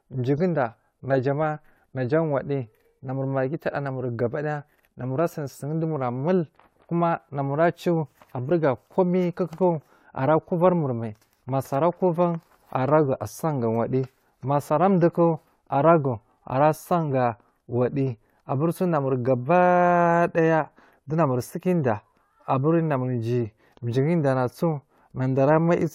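No audible technical faults detected.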